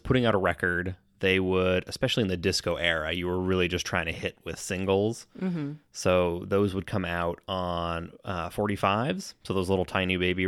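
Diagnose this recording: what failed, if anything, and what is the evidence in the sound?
Nothing stood out on listening to this speech recording; no stage of the chain gave any audible sign of having failed.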